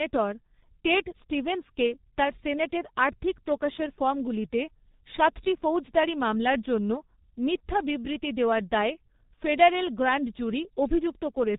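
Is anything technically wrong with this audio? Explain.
Yes. Throughout the speech, the sound is muffled and hoarse, with smeared consonants and heavy damage: G.723.1 codec compression. It discards everything above 4 kHz and codes 30 ms frames with a slowly updated voice model, which fits a very low rate of around 6.3 kbit/s.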